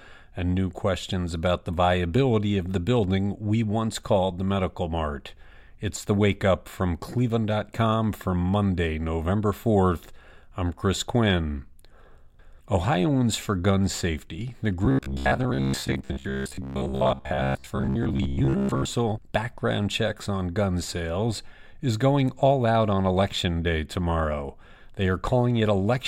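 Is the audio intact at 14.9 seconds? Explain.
No. From 14.85 to 18.85 s the speech turns into a rigid, metallic buzz pitched at 66.7 Hz. The words are still roughly traceable, but most of the time what you hear is repetition rather than new audio. This is robotic sound from repeated short buffers, likely caused by audio arriving too slowly. The playback fills each gap by looping the last fragment of about 15 ms, and that loop length sets the fixed buzz pitch.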